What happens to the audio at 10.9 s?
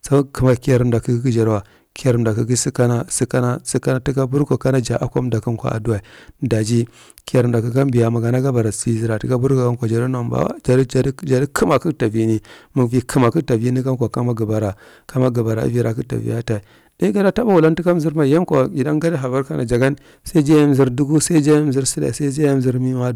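At 10.9 s the speech is hard clipped, as it is across the whole recording. The signal is driven about 7 dB past what the stage can pass, so the loudest peaks are sliced off flat. Only around one percent of the waveform hits that ceiling. The squared-off tops add harmonics high in the spectrum. They are heard as a gritty crackle on the louder syllables rather than a constant fuzz.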